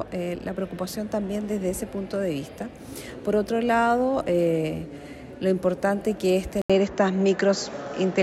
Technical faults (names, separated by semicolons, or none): input switched to a poorer device